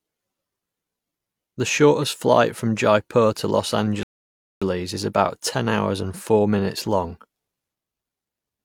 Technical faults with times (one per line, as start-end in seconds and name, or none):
4.03-4.62 rebuffering stall